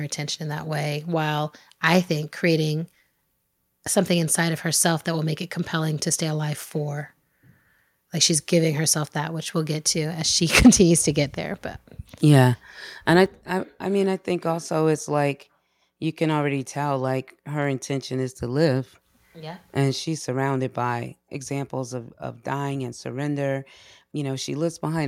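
From 10.55 to 10.69 s, just before "to get there", there's microphone overload. The peaks flatten out and pick up a crackly edge, likely because the input gain pushed the converter about 6 dB past its limit, clipping something like a sixth of the samples in that stretch.

At 10.67 s the microphone volume steps down by about 3 dB, and it does so again at 13.26 s, between "yeah and I" and "I I mean I", this time by about 6 dB. Each time the voice and background drop together, all at once, likely the call software judging the input too loud and cutting the device level in a single jump.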